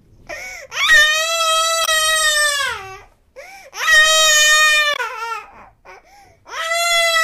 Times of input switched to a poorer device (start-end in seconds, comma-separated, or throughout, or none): none